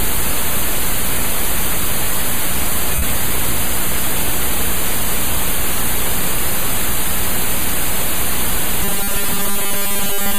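At 2.95 s there's a 70 ms stretch of lost LE Audio frames. The decoder patches the gap with a noisy smear built from the last bit of spectrum. From 8.83 s to the end, you get robotic sound from repeated short buffers: a rigid 200 Hz metallic buzz, likely from a tiny buffer looping while most of the real audio gets skipped.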